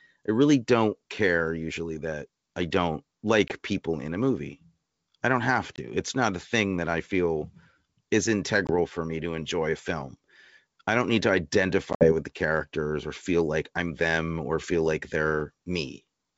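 Packet loss on an ADPCM call punches hard silent holes at 3.48–3.55 s (after "usually that I don't"), 5.76, 8.67 and 11.93–12.12 s. Each restart comes back slightly distorted while the decoder's predictor resyncs.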